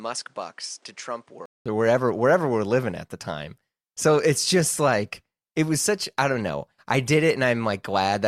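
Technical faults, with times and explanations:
0.00–1.66 s, input switched to a poorer device: the opening stretch is about 10 dB quieter and sounds dull, with nothing above 10.6 kHz and its own background noise roughly 35 dB under the speech. A 200 ms silence follows, and then "or wherever wherever we're" arrives fuller and brighter, likely because the recording moved to a different microphone. On a spectrogram the upper band is empty until that gap. The waveform shows a smaller envelope, then a flat break.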